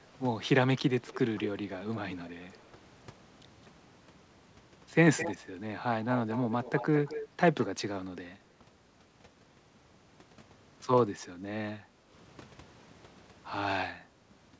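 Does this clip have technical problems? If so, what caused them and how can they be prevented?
Yes. Echo leak at 1.07, 1.37, 2.12, 2.53, 5.17, 6.13–7.28 and 7.61 s: a quieter copy of the speech returns 213 ms late, likely from residue a loudspeaker-side echo canceller missed. Prevent it with headphones or better echo cancellation on the far device.

Background gated by the echo canceller, 11.79–12.09 s: the room sound dips by about 12 dB while the canceller suppresses the microphone, then recovers. A gentler suppression setting or headset use prevents this.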